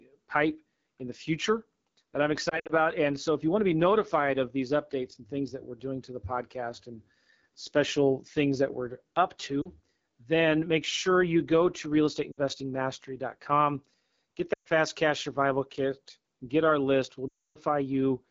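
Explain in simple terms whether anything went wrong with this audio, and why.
The whole recording has passed through the AMR wideband (HD Voice) codec at one of its low settings. The voice sounds rough and raspy throughout, unlike a narrowband phone line, which would sound muffled and thin.

There are also lost AMR speech frames, where the decoder stretches the last sound before fading it away. This causes brief warbles or dips, and longer runs drop to near silence. They occur at 2.49 to 2.73 s after "the future that I'm", at 9.61 s, at 12.32 s after "sure you go to", at 14.53 s before "cash survival kit get", and at 17.28 to 17.60 s, the longest dropout.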